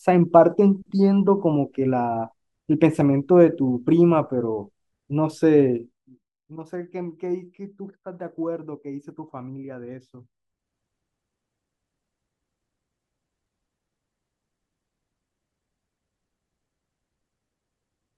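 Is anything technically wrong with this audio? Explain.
Yes. Zipper noise appears at 5.71 to 6.29 s and again at 10.11 to 10.76 s. Each time the speech level is moved in coarse, unsmoothed steps, first dropping by roughly 15 dB at around fifty steps a second, then rising by a similar amount at around forty a second. Every step jumps the waveform abruptly and leaves a tiny click, so a fine ticking, zipping texture rides on the speech while the level slides.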